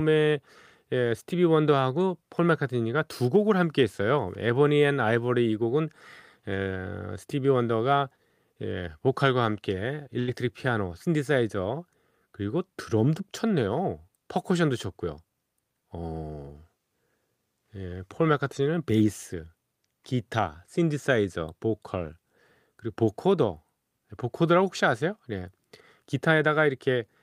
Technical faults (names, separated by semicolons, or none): burst of packet loss